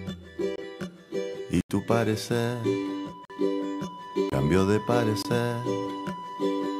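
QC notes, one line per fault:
0.56–0.58 s, block of digital silence: a 23 ms dropout to zeros, consistent with one 1024-sample output buffer not being filled in time. The abrupt cut and return is heard as a tick or short hole.
1.61–1.70 s, block of digital silence: an 86 ms hole, long enough to hear as a brief gap.
3.25–3.30 s, block of digital silence: 46 ms, fitting two missed 1024-sample buffers. It sounds like a pop or short hole.
4.30–4.32 s, block of digital silence: 23 ms, a tick or short hole.
5.22–5.25 s, block of digital silence: 23 ms, a tick or short hole.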